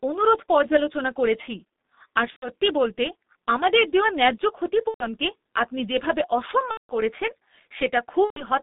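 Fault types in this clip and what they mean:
G.723.1 codec: The speech sounds muffled and hoarse throughout, with smeared consonants and nothing outside roughly 200 Hz to 3.7 kHz. The codec packs the voice into 30 ms frames at about 6.3 kbit/s, and its slowly updated voice model damages this clip heavily.
VoIP packet loss concealed by the speech codec: At 2.30, 4.88, 6.71 and 8.24 s the speech stretches into a buzzy tone or coloured noise that fades, before "আপনি যেভাবে" and elsewhere. Lost packets, about 120 ms each, or 180 ms at 6.71 s, were filled by extrapolating the last frame.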